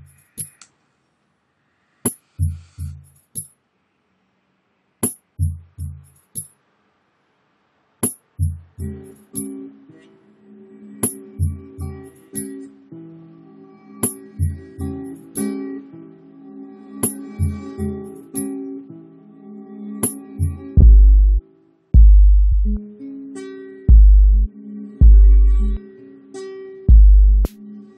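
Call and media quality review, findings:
Short stutter at 20.79 s, then again at 22.51 s. A 46 ms slice, then a 70 ms slice, plays twice. Repeated frames: the decoder got the same compressed frames twice (lengths fit two and three 23 ms frames), adding 116 ms of duration.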